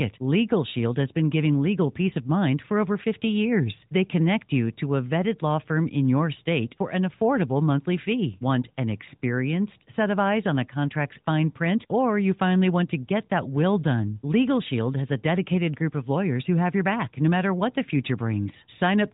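No technical faults can be heard in this speech. It comes through an AMR narrowband mobile codec with nothing above about 3.8 kHz and only light codec colouring, which points to the codec's highest 12.2 kbps mode.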